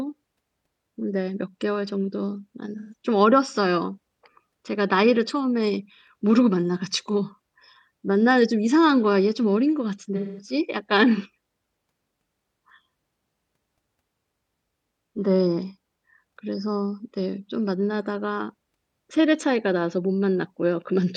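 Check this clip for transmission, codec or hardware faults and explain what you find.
AAC frame loss with concealment occurs at 2.78 to 2.94 s and 10.16 to 10.53 s. The decoder bridges missing frames from the last good spectrum, giving a smeared, phasey patch rather than a hard silent gap.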